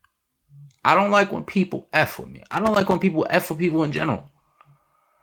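Right after "with me", from 2.48 to 2.96 s, loose connector crackle breaks in. A worn or dirty contact rapidly makes and breaks, chopping the speech into scratchy, irregular pops. The waveform shows spiky, jagged dropouts and offset jumps, and the spectrogram shows broadband vertical streaks.

From 3.47 to 4.77 s, a call bitrate drop leaves the speech coarse, watery and muffled for about 1.23 s, which fits the encoder falling from roughly 32 to 17 kbps. The spectrogram's upper band goes dark and smeared, and the texture turns blocky until quality recovers.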